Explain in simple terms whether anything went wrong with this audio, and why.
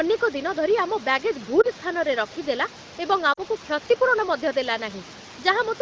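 Lost AMR speech frames at 1.61 to 1.67 s and 3.33 to 3.41 s: radio errors spoiled tiny slices of the call, so the phone briefly repeated the previous sound, causing short warbly dips.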